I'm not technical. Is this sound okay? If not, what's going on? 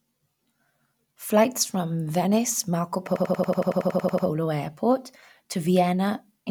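No. From 3.16 to 4.27 s the speech stops moving forward and stutters. This is a system hang loop. The computer briefly froze, but the sound hardware kept replaying the last chunk of audio it held. That chunk is about 93 ms long, which fits a 4096-sample buffer. It repeats 12 times, about 11 times per second, so it sounds like a machine-gun rattle. Afterwards the speech picks up where it left off, with nothing noticeably skipped.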